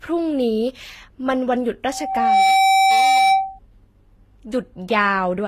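Loudspeaker feedback squeal runs from 1.89 to 3.59 s in this speech recording: a single tone near 772 Hz swells up over roughly half a second and then sits a few decibels above the talker, at about 5 dB, until it cuts off. The microphone is hearing the loudspeaker it drives, and at that one frequency the loop gain has passed unity, so the tone keeps reinforcing itself each time around. Transcoding between lossy codecs colours the whole clip. The audio has the smeared, swishy quality of a low-rate spectral-band-replication coder with a second coder's quantisation grain laid on top, and nothing remains above 14.9 kHz. The likely cause is an HE-AAC encode at around 24 kbit/s later re-encoded to Vorbis at around 43 kbit/s. The second pass spends its bits on the first codec's artefacts and adds its own, while the lowest band limit in the chain carries through.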